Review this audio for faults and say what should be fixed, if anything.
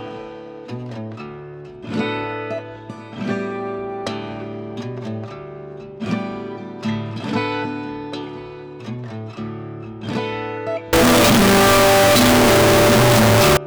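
From 10.93 to 13.57 s the sound turns very loud, harsh and nearly square, at an almost fixed, high level. Background noise matches the main sound. This is likely float read as integer: 32-bit float samples interpreted as 32-bit integers. Declare and check the sample format at every read.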